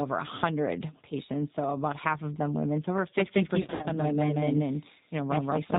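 From the start the speech carries G.729 codec damage that is plainly audible, with nothing above 4 kHz and a slightly rough, synthetic texture. That fits an 8 kbit/s G.729A stream, where each 10 ms frame is rebuilt from a vocal tract filter, a pitch predictor and a few pulses.

At 3.18 s a doubled audio track begins abruptly and runs to the end. A full-band copy, roughly as loud as the original, trails about a fifth of a second behind with no decay or room colour. The likely cause is a second, slower capture path mixed back in.

From 3.62 s to 3.88 s, VoIP packet loss concealed by the speech codec breaks the sound. About 140 ms is missing, scattered across 220 ms, with the longest gap 70 ms. The decoder stretches its last pitch and filter into a fading buzzy tone or coloured noise, and the speech stays weak briefly afterwards.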